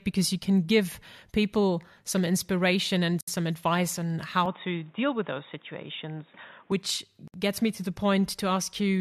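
At 3.21 to 3.28 s, just after "people some inspiration and", the speech drops into a 68 ms hole with smeared edges before "some advice on" resumes. This is a gap at a join of encoded pieces. Separately encoded segments were butted together with their encoder delay and end padding left in.

From 4.46 to 6.72 s, after "and some advice on", the speech turns dull and boxy, with nothing above 3.8 kHz and a faint new background noise well below it, at the same level and with no pause. The likely cause is the input switched to a poorer device.

At 7.28 to 7.34 s, just before "gets me to the", a second join gap of 63.5 ms appears, 4.0 s after the first.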